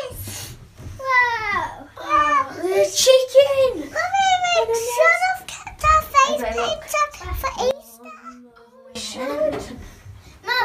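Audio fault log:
7.71–8.95 s, one channel inverted: the level falls by about 19 dB, likely because one channel's polarity is reversed and the shared content cancels in the mono sum.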